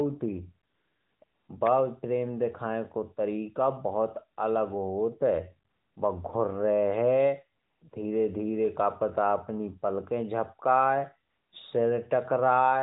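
A speech clip carried over a narrowband phone link, with light coding damage that fits the top 12.2 kbps mode. In pauses at 0.70–1.22, 1.24–1.48, 5.70–5.96 (before "बा घुर्रेहे"), 7.60–7.82 and 7.90–7.92 (both before "धीरे धीरे का पता") and 11.30–11.52 s, the real background drops out and a smooth, steady hiss takes its place. This is AMR comfort noise: the phone stopped sending speech frames and the receiver filled those gaps with synthetic noise.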